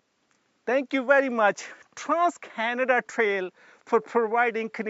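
No technical faults are audible.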